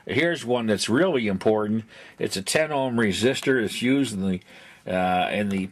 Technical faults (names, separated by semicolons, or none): none